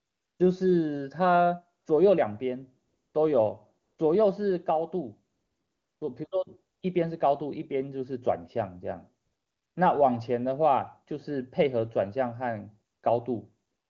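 AMR comfort noise fills ten speech pauses between 0.0 and 13.89 s, lasting 20 to 680 ms. The longest spans 5.33 to 6.01 s. The sender stopped transmitting speech frames, so the receiver synthesised steady, smooth noise that switches abruptly, showing as flat, uniform spectrogram bands with hard edges.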